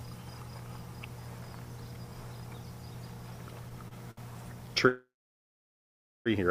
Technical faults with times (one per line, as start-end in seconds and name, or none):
3.88-4.19 short stall from a late packet
4.88-6.28 call audio freeze